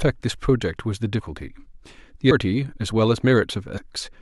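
Compressed frames skipped at 1.19–1.21 s, 2.30 s and 3.76 s: the speech jumps ahead roughly 150, 200 and 100 ms, multiples of 23.2 ms frames.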